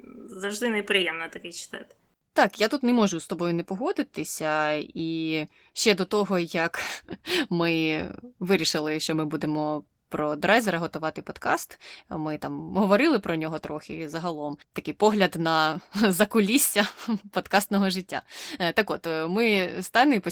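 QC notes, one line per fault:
Throughout, Opus voice compression: hybrid coding at what sounds like about 16 kbps (SILK below 8 kHz, CELT above) quantises the excitation coarsely, leaving plainly audible codec damage on the speech.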